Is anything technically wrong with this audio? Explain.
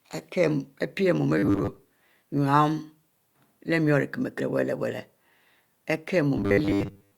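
Yes. There's robotic sound from repeated short buffers at 1.39–1.83 s, just after "pie mu", and again at 6.38–7.18 s. It's a rigid, metallic 100 Hz buzz, likely from a 10 ms chunk being replayed while real audio gets skipped: about half the time in the first stretch, most of it in the second.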